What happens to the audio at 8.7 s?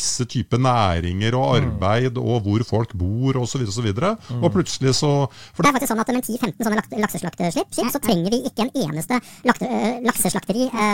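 At 8.7 s you're inside a section at the wrong speed, running from 5.65 s to the end. It's likely played against the wrong clock at 1.73 times speed, so the speech sounds hurried and roughly ten semitones high.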